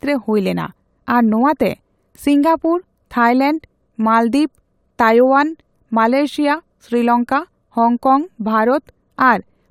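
Nothing technical goes wrong anywhere in this speech recording, so there's no fault to point to at any moment.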